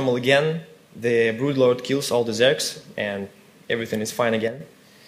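At 4.48 s the most likely cause is one channel of a stereo pair dropping out, so that for about 0.13 s, until 4.60 s, only the other channel reaches the mono mix. With half the signal missing, the sound falls abruptly by about 6 dB and then returns just as suddenly to its former level. Tone and character stay the same through the gap; what you hear is a brief, sharp-edged dip in loudness near the end of the clip.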